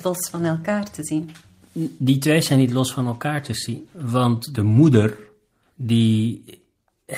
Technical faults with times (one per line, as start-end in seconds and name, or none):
0.00-7.17 clock drift between sender and receiver
0.10-5.79 repeated timing corrections